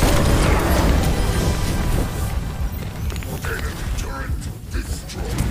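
No technical faults can be heard anywhere in this audio. Nothing in it calls for a timestamp or an explanation.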